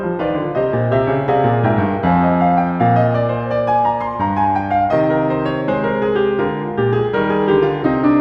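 No faults are audible anywhere in this music recording; nothing in it needs flagging.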